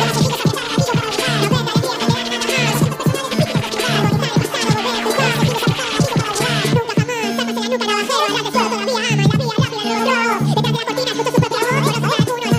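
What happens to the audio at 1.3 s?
At 1.3 s the audio is being read two samples at a time (double speed), as it is for the whole clip. The player treats each pair of samples as a single frame, as if the data held two channels or samples twice as wide, so it gets through the material twice as fast. The sound therefore runs at 2x speed and sits a full octave, 12 semitones, higher.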